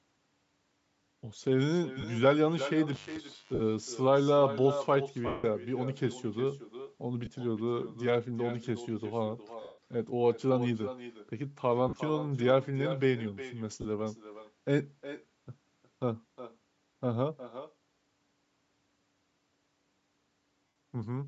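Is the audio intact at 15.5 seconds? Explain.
No. At 15.5 s, as throughout, an echo with no canceller is present: the far end's loudspeaker feeds its microphone, returning a copy about 12 dB quieter, roughly four-tenths of a second later. It is a distinct, thinner repeat, not a smeared room tail like reverb.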